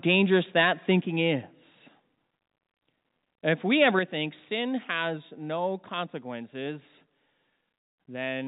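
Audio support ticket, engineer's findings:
Microphone overload at 0.09–0.95 s and 3.82–3.99 s. Harsh crackle on the loudest syllables, peaks about 7 dB and about 5 dB over full scale. Likely mic input gain too high, so the converter flattens the waveform tops.

Microphone volume stepped down at 1.02 s and 4.0 s. Voice and background drop together, about 4 dB then about 5 dB, each right after a clipped stretch. Likely the call software's automatic gain control cutting the input level in one step.

Call path band-limited, nothing above 4 kHz, consistent with G.711.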